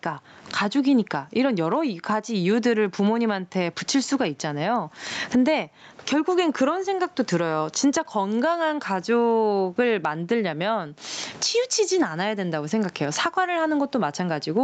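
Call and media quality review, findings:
Gain pumping throughout: loud and soft parts squashed closer in level, about 20 dB swing. Likely excessive mic gain, fast limiter clamping every peak.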